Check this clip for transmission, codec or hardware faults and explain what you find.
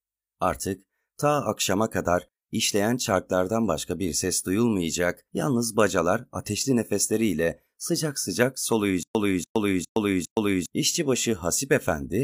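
One fault is present: a stutter with silent gaps. From 9.03 to 10.66 s, right after "ateşli nefesleriyle sıcak sıcak", a 287 ms speech fragment repeats four times. Each repeat is followed by 120 ms of digital silence, a steady 407 ms cycle. A stalled player or stream likely replayed its last buffered fragment at each retry, so the speech due in that span is lost.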